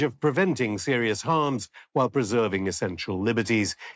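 No technical faults can be heard in this audio; it has passed through a call's microphone processing, which keeps the content below 8 kHz and trims the lowest bass as expected.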